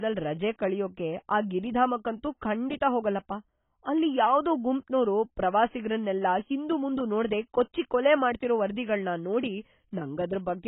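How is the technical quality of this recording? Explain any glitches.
The recording is heavily degraded by AAC compression across the whole clip. The likely cause is an AAC-LC encoder run at a very low bitrate, which fits something near 16 kbps. Starved of bits, the encoder discards everything above 3.8 kHz and quantises the remaining frequency lines coarsely. The speech therefore sounds dull and muffled, with a smeared, warbling texture on sustained sounds and a fizzy, unstable edge on sibilants.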